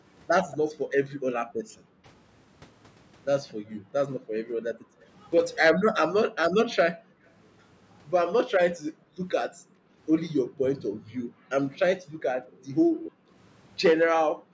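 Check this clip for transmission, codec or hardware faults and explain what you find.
Two faults recur in this speech clip, an echo leak and background gated by the echo canceller. The audio is band-limited, with nothing above 8 kHz, which is the expected result of call microphone processing.

Echo leak, at 0.51–0.57 s, 7.25–7.3 s and 12.47–13.12 s: a faint, discrete repeat of the voice arrives 229 ms late. It is about 20 dB down at first, barely audible at 7.25 s, and strongest, about 15 dB down, in the longest scrap. The likely cause is a far-end echo canceller letting loudspeaker sound back into its microphone. The fixed delay and separate copy distinguish it from room reverberation.

Background gated by the echo canceller, at 0.68–2.08 s, 3.54–5.08 s, 6.29–7.24 s and 8.49 s to the end: the room tone sinks by as much as about 40 dB for roughly a second, a second, under half a second and three seconds. 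The canceller was clamping the microphone while its loudspeaker played. Only the background drops, so this is not a network dropout.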